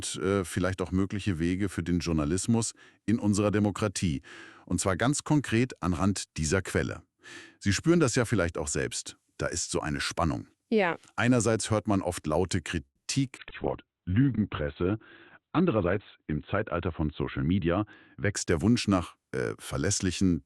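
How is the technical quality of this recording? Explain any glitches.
The recording has a cluster of network-related faults between about 12.85 s and 18.4 s.

From 12.85 to 13.09 s there is a call audio freeze. The last sound is stretched into a fading buzz for about 210 ms, including roughly 110 ms of silence, and then resumes where it stopped. This is likely a jitter buffer running dry while packets were held up in transit.

There are two skip ahead events, at 13.36–13.40 s and 13.49–13.53 s. Playback jumps forward with only a tiny fill, losing roughly 100 ms and then roughly 70 ms of audio, so the two sides of each jump join almost directly. These fit dropped audio as the buffer sheds backlog.

A call bitrate drop runs from 13.41 to 18.40 s. The encoder fell from 64 to 8 kbps and held the lowest rate for about 2.75 s, with bandwidth narrowing from 20 kHz to 4 kHz. The sound becomes muffled and coarse, losing its high end until the bitrate recovers.

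From 13.85 to 15.46 s there is a jitter buffer slow-down. Repeated pitch periods add 170 ms, so the audio plays at about 90% speed with unchanged pitch. Sounds are drawn out while the receiver rebuilds its reserve.

From 15.78 to 17.78 s there is a jitter buffer speed-up. The receiver trims short pitch-period segments, removing roughly 200 ms, so the audio runs at about 109% speed at the same pitch and sounds hurried as excess buffered delay is cut.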